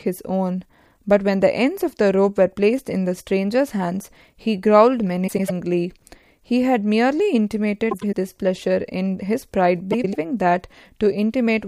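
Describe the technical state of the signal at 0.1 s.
At 0.1 s the speech signal is intact, with no audible fault at that moment.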